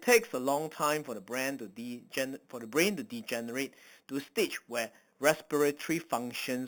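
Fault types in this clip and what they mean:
Imaging from sample-and-hold upsampling: stepwise repetition from an apparent 8 kHz source mirrors speech into 4–8 kHz, about 12 dB down; unlike hiss, this fizz follows speech level and runs against pitch.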